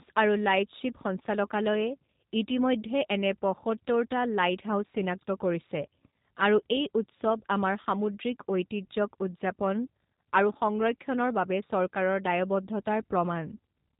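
Speech runs through G.729 coding for its whole length, with a hard ceiling near 3.8 kHz that shows as an empty band above it on a spectrogram. The rough, synthetic texture of pulse-based frame reconstruction fits an 8 kbit/s stream.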